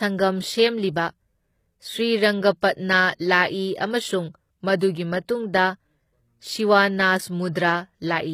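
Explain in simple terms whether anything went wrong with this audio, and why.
The speech has a plainly audible coarse, artificial quality in its upper range throughout, and nothing is present above about 14.9 kHz. This is likely HE-AAC compression at a low data rate. That kind of encoder keeps only the lower part of the sound properly and fakes the treble by copying lower bands upward and roughly shaping them. The rebuilt top end isn't the real one, so it doesn't quite match the rest and sounds synthetic.

Three times, a brief hiss comes just before a sharp onset, making the attack soft and smeared. This is pre-echo. It happens at 2.61 s (about 15 ms), from 3.15 to 3.20 s (about 51 ms), and from 7.53 to 7.55 s (about 25 ms). The encoder works in short blocks and spreads its noise across each whole block, so noise meant to hide under a loud attack also fills the quiet moment before it.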